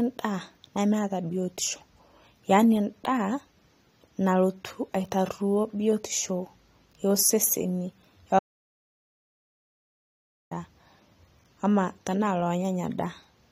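At 8.39 s the speech stops dead and the clip falls into total silence until 10.51 s, about 2.1 s later, when it resumes mid-flow. This is an audio dropout to silence, most likely from the input being lost while the recorder kept writing silence. Nothing of the room tone survives, so whatever was said in that stretch is gone. On a waveform the trace collapses to a flat line, and a spectrogram shows a sharp-edged, empty block across every frequency.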